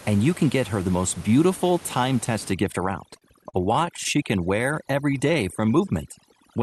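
Overdone noise removal starts at 2.52 s and lasts to the end. A noise reducer set far too strong is cutting individual frequency bands whenever they sit near its noise estimate. The room noise, about 20 dB under the speech, collapses into near silence with twinkling specks.

Repeated stalls (stutter) run from 3.13 s to 4.06 s. Packets arrived late, so the playout buffer kept running dry, ten times in that span. Each time the receiver stretched the last sound to cover the wait, the longest about 39 ms. In total about 155 ms, roughly a sixth of the stretch, is filled in. Nothing is lost, but the speech drags and stutters.

A jitter buffer slow-down follows from 4.84 s to 5.86 s. To rebuild its reserve, the receiver repeated single pitch periods and slivers of pauses many times over, adding about 88 ms. Speech in this stretch plays at 92% speed with unchanged pitch, so sounds are drawn out.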